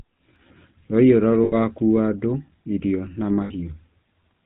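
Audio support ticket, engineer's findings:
Speech, band-limited throughout. Nothing above 4 kHz; buzzy, gravelly roughness on voiced sounds, plainly audible. Component: GSM full-rate codec, consistent with the 13 kbps full-rate mode. Mechanism: vocal-tract filter driven by a coarse, regularly spaced pulse excitation, only every third excitation sample kept, so fine harmonic detail is lost.

0.36 s: single sharp click, thin vertical line across the spectrum. Likely dropped samples, a handful missing, well under a millisecond. Waveform jumps to a later value; gap too short to remove audible sound.

1.44–1.53 s: rough metallic ring held, just before "andũ irio na". Lost GSM frames, consistent with four 20 ms frames (80 ms). Decoder repeats last good frame's parameters.
3.44–3.52 s: same metallic hold, about 60 ms, right after "andũ irio na". Fits three lost frames; same concealment by repetition.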